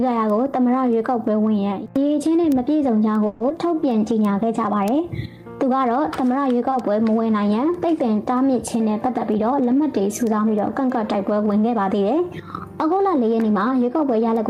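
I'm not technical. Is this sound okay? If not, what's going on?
No. From 0.30 s to the end there are word clock ticks: sharp clicks of uneven strength, about every third of a second, because the receiving device's clock runs slightly out of step with the sender's.

At 3.26–3.41 s a call audio freeze holds the last sound as a fading buzz for 140 ms, likely because packets were delayed. The sound then picks up where it stopped, with nothing lost.

At 3.49–3.51 s there's short concealed packet loss. About 50 ms of audio never arrived, and a quick 10 ms patch smears over the hole.

A jitter buffer slow-down follows at 3.68–4.00 s. The sound plays at 87% speed without changing pitch, adding 47 ms so the buffer can build up a reserve.

At 6.70–6.73 s there's a short stall from a late packet. The sound is held for an extra 20 ms until the packet arrives, then carries on with nothing missing.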